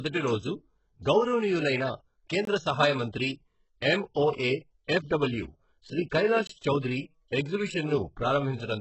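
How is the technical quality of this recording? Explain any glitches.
The recording has clear technical problems. Throughout, the speech sounds gritty and lispy in its upper range, two brief dropouts break the flow, and the second half turns dull and muffled.

The grainy, metallic quality on sibilants comes from heavy codec damage, most likely HE-AAC compression at a very low rate, around 8 kbps. HE-AAC stores only the lower spectrum and rebuilds the treble by spectral band replication, copying lower bands upward and shaping them with a coarse envelope. That synthetic treble doesn't line up harmonically with the real lower bands, which produces the artificial hiss on s sounds. Nothing is present above 8 kHz.

There are two short holes, each about 21 ms, from a gap between chunks. The first runs from 2.45 to 2.47 s, right after "రోజు గౌరవనీయులైన". The second runs from 6.47 to 6.49 s. They are 4.0 s apart, matching the length of the chunks the audio was delivered in. 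At each join, silence interrupts the sound, though no audio is lost.

From 3.98 to 8.72 s, the speech loses its brightness and sounds muffled because de-emphasis was applied wrongly. A treble cut meant to undo pre-emphasis was applied either to audio that never had pre-emphasis or a second time. The result is a smooth downward slope toward the highs, about 8 dB lower at 10 kHz than at 1 kHz, which dulls consonants and air.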